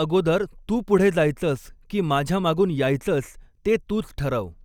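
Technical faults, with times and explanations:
No technical faults are present, so there are no times or explanations to give.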